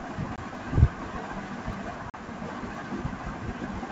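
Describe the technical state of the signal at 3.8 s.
At 3.8 s the speech is intact, carried cleanly through G.722 wideband telephone coding at 64 kbit/s with no fault at that moment.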